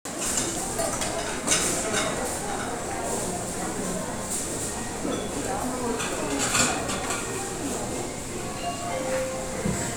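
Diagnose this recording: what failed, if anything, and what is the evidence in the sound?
Listening closely to the sound turned up nothing that points to a failure at any stage of the chain.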